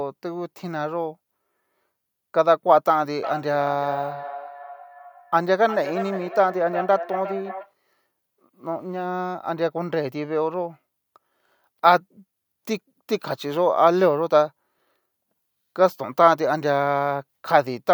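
From 3.23 to 7.72 s, the speech returns in thin, ringing copies roughly every 0.4 s, peaking about 13 dB below the voice. This is feedback echo between two devices: one plays the other's audio aloud, that microphone recaptures it, and neither echo canceller removes it.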